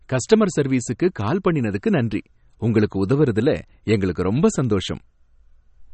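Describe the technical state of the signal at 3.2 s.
At 3.2 s the speech sounds dull and watery, with nothing above 8.4 kHz and a swirling, unstable texture in the upper range. This plainly audible MP3 compression damage runs through the whole clip, not just this moment. The likely cause is an MP3 encoder starved of bits, which fits a low bitrate around 32 kbps. It cuts the treble at a fixed point and drops weaker frequency lines, and these flicker in and out from frame to frame.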